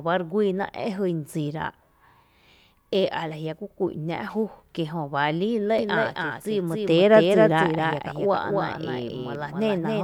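At 5.79 s a doubled audio track begins: the speech gains a full-band copy about a third of a second behind, roughly 5 dB quieter, that runs to the end. It likely comes from a second, slower capture path. Unlike an echo or reverb, it arrives abruptly, never decays and carries no room colour.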